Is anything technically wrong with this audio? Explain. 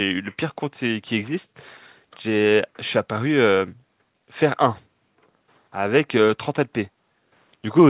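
No, nothing technically wrong stood out on listening to this speech, which comes through a call path whose G.711 mu-law coding leaves nothing above 4 kHz, as that codec does.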